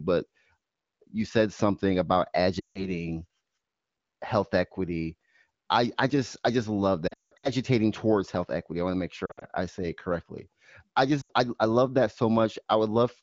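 Fading dropouts at 2.60 to 2.90, 7.07 to 7.50, 9.26 to 9.44 and 11.21 to 11.32 s are lost AMR speech frames: the decoder repeats the last good sound, fading it out.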